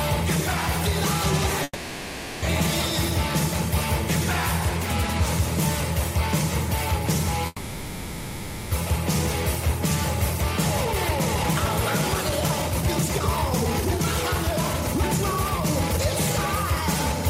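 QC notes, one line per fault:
1.63–2.45 s and 7.46–8.74 s, call audio freeze: the last sound stretches into a fading buzz with a brief dip to silence, then resumes where it stopped. This adds gaps of about 0.79 s and 1.25 s, likely from delayed packets draining the jitter buffer.
10.85–16.56 s, jitter buffer speed-up: the audio hurries along at 133% speed with unchanged pitch, as the receiver trims repeated pitch-period slices, about two seconds in all, to work off excess buffered delay.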